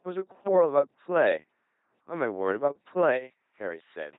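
Throughout the speech, an LPC-10 vocoder has rebuilt the sound. Each moment is either a buzzing pulse train or hiss shaped by a simple filter, giving a heavily robotic tone consistent with 2.4 kbit/s. A spectrogram shows nothing above 3.8 kHz, rigid harmonics, and abrupt voiced-to-noise switches.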